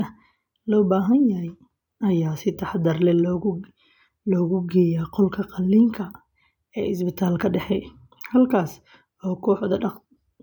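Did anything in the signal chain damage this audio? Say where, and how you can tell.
No, nothing in the signal chain damaged this audio.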